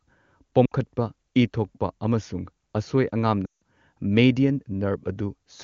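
Lost AMR speech frames cause two gaps: 0.66 to 0.72 s (60 ms) and 3.45 to 3.62 s (160 ms). The decoder repeats stale pitch and vocal tract settings with falling gain, so speech smears, then fades, showing as a tapering waveform and blurred spectrogram harmonics.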